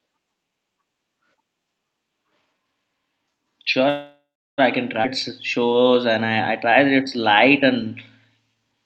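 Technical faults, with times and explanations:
3.89–4.60 s, call audio freeze: Packets were likely held up and the jitter buffer ran dry. The last sound trails off into about 0.34 s of silence, then resumes at "I can".
5.02–5.05 s, skip ahead: Right after "I can", a stretch of about a third of a second was dropped. Playback jumps forward with almost no gap, losing that audio.
5.60–7.89 s and 8.55–8.85 s, jitter buffer slow-down: The buffer rebuilt its reserve by repeating pitch periods, adding 157 ms and then 42 ms. The speech is drawn out at 93% and then 88% speed without any change in pitch.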